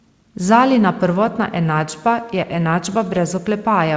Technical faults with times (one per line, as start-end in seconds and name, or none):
none